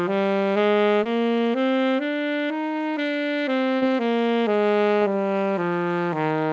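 There's short concealed packet loss at 1.04–1.07 s, 3.77–3.83 s and 4.99–5.04 s. Roughly 20 ms, 40 ms and 20 ms of the stream arrived too late, so the receiver stretched the preceding sound to cover each gap. You hear a quick smear or wobble.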